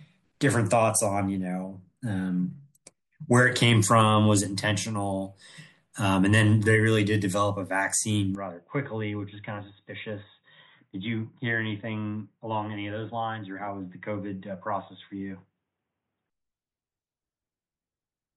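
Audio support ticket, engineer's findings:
Speech turns dull and boxy abruptly at 8.35 s: nothing above 3.8 kHz, level down roughly 5 dB, faint new noise floor. Clears at 16.30 s, no gap at either switch. Likely input switched to a poorer device. Unlike a bandwidth-only drop, tone, level and noise change together.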